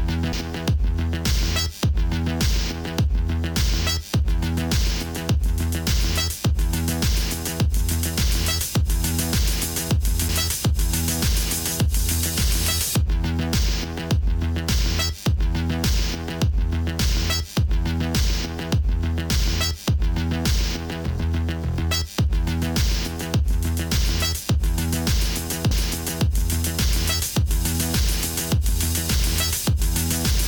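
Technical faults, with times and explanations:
0.33 s, 10.29 s, 25.71 s: CD skip. The laser tracking jumps to another turn of the disc's spiral, so playback mutes for a few milliseconds, leaving a brief tick, then resumes from a different point. The sound lurches abruptly forward or back.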